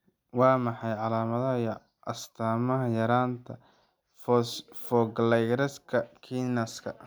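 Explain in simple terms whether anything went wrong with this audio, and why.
Nothing went wrong here.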